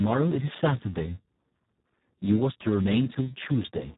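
Right from the start and for the whole clip, the speech has that Speex codec sound, and it's a heavy case. The hoarse, buzzy, almost robotic texture points to a bitrate down around 4 kbps, where there are barely any bits left to describe the excitation, so the model falls back to something near a vocoder. Nothing survives above 3.8 kHz either, so it's narrowband and muffled on top of the grit.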